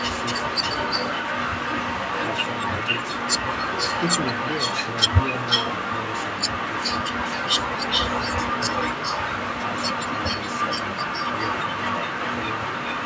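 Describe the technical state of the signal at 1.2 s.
At 1.2 s an echo leak is present, running from 0 to 13 s. A copy of the speech trails it by 0.42 s at about equal loudness, likely an echo canceller passing loudspeaker pickup back. Spectrograms show syllables of the echoed voice repeated 0.42 s later, and the waveform shows doubled envelopes.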